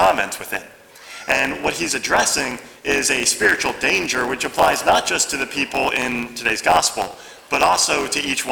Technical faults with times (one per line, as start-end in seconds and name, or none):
0.00-8.51 block size mismatch (truncated)